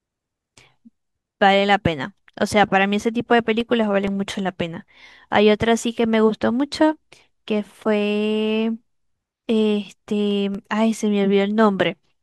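A speech recording carrying CD scratch ticks in two bursts: five ticks from 3.37 to 4.31 s, the longest about 1.5 ms, and three from 10.31 to 10.78 s, the longest around 2 ms. Each burst repeats at roughly four to six per second. That matches a surface blemish passing the laser once per disc revolution and corrupting more data than the error correction can reconstruct, so the player briefly interpolates or mutes those samples.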